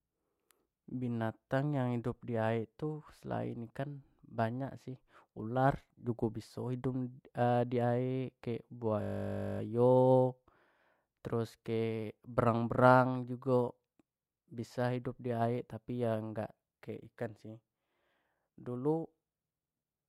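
System hang loop, 9.02 to 9.6 s: the computer or driver froze while the hardware replayed one 20 ms slice 29 times, making a steady 50 Hz buzz.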